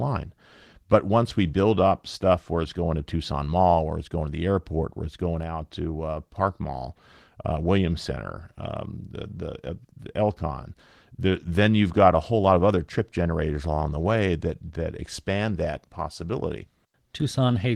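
No faults found in this speech, and the Opus voice compression sounds as expected for a hybrid fullband stream with only light coding softness, which fits a rate near 20 kbps.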